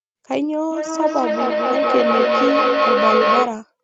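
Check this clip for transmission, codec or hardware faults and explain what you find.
There is one fault, a feedback echo between two devices, from 0.71 s to 3.6 s. Two devices in the same room are on the call. One plays back what the other's microphone sent, and that microphone picks it up again. Each echo canceller only removes its own device's output, so the loop stays open. The speech returns about every fifth of a second, thinner and ringing. The repeats build rather than fade, peaking about 5 dB above the speech. The audio also stops at 8 kHz, which is expected for this call path.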